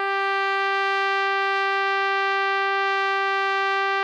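Nothing here trips a technical fault; the music just rolls along with nothing breaking in at any point.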